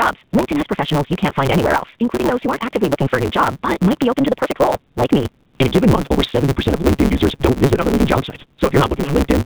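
From start to end the speech sounds buzzy, thin and synthetic, with nothing above about 4 kHz. This is the AMR narrowband mobile codec (AMR-NB). Its vocal-tract model, fed by only a few pulses per subframe, is working at a low bitrate, which fits about 8 kbps, so the damage is plainly audible.

Over the whole clip a steady 138 Hz buzz rides on the speech, which also runs 1.6 times too fast while keeping its timbre. This is a block size mismatch (truncated). One stage writes blocks, which fits 512 samples each, longer than the next stage reads, so the tail of every block is dropped. The regular cuts produce the buzz and shorten the timeline.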